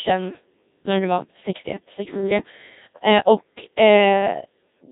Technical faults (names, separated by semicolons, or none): Codec 2 vocoder